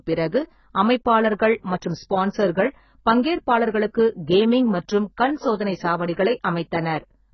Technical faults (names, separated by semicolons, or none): AAC compression